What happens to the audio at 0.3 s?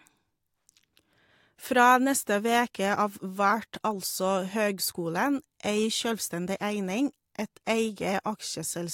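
Nothing goes wrong at 0.3 s; the speech there plays through intact, with no dropout, click or distortion.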